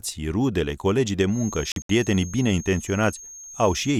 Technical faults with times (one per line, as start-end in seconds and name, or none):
1.25-4.00 feedback whistle
1.72-1.89 Bluetooth dropout